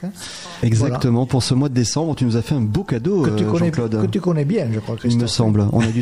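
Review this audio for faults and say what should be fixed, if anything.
No faults can be heard anywhere in the recording. Nothing needs to be fixed.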